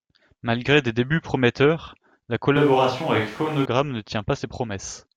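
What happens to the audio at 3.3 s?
At 3.3 s the sound is in the middle of a switch to a distant microphone, which runs from 2.56 s to 3.65 s, right after "des débuts prometteurs la". The close pickup was likely lost, leaving a microphone further away. The speech turns roomy and hollow, with thinner bass and room noise rising to roughly 25 dB below the speech, while the overall level stays about the same. Both changes are abrupt.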